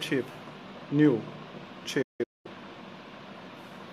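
At 0.33 to 0.35 s there is a repeated buffer. Fresh audio arrived late, so the same 11.6 ms piece played twice more. That fits a 512-sample buffer. It sounds like a quick buzzy stutter, and about 20 ms of audio is skipped.

At 1.83 s a second repeated buffer occurs. The same short piece plays once extra, with hard joins. It is heard as a brief click, and roughly 10 ms is lost.

From 2.02 to 2.51 s comes a digital broadcast dropout. The receiver lost valid frames and muted. The sound fades out within 8 ms and breaks into several holes. Together they total 384 ms of silence across 427 ms, and the longest hole lasts 213 ms. That material is gone.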